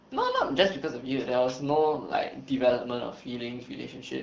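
No technical faults can be heard in the speech. It carries the character of the AMR wideband (HD Voice) codec at 12.65 kbit/s, with only light coding damage, as the top of the band above 6.4 kHz is filled by shaped noise rather than coded directly.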